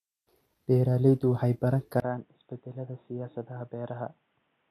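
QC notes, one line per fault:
Throughout: low-bitrate audio saved at a high bitrate. The file plays as MP3, but nothing sits above 14.5 kHz and the leftover artefacts point to a likely earlier pass through a low-rate codec, around 64 kbit/s. The later, richer encode can't restore what was lost.
2.0 s to end: input switched to a poorer device. A 20 ms dropout, then the sound turns boxy and dull, cut off above 3.8 kHz and about 10 dB quieter, with a new noise floor roughly 40 dB down. A switch to another microphone or a headset call profile is likely.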